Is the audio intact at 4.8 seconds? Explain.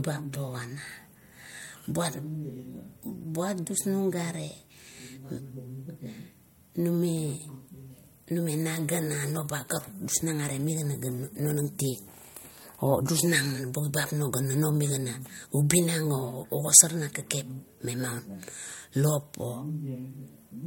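Yes, at 4.8 seconds the speech plays through intact, with no dropout, click, glitch or other fault at that moment.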